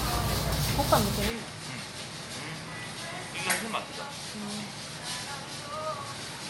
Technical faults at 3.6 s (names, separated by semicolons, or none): input switched to a poorer device